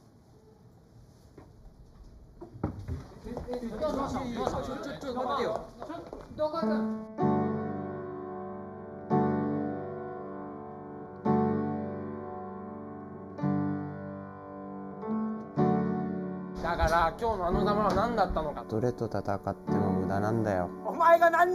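All the way through, the sound has a hollow, phasey edge, which is classic channel delay (comb filtering). One channel is running about a fifth of a millisecond late, so when the two sum to mono they cancel at evenly spaced frequencies, starting with a notch at around 3 kHz.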